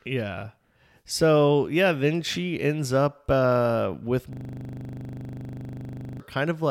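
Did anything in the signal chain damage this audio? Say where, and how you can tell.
Yes. After "ends up uh with", from 4.33 to 6.20 s, the driver or buffer stage shows a system hang loop. One 40 ms slice repeats exactly, dozens of times, giving a steady 25 Hz buzz. A short, perfectly identical repeat that continues until the system recovers points to a frozen ring buffer, not decaying packet-loss concealment.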